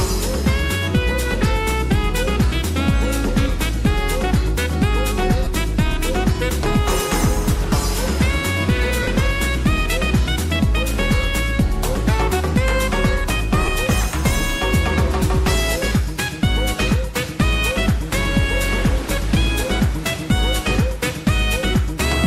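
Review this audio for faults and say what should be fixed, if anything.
Lost LE Audio frames: the Bluetooth LE Audio link dropped frames three times, and the LC3 decoder covered each gap by reusing the last good spectrum with randomised signs, fading it as the gap went on. Brief noisy smears replace the sound at 5.44–5.47 s and 13.65–13.68 s, each about 22.5 ms, consistent with three 7.5 ms frames. A longer 45 ms smear at 9.03–9.08 s starts to fade toward silence. Improving link robustness, through a stronger radio path, less interference or retransmission, would prevent these dropouts.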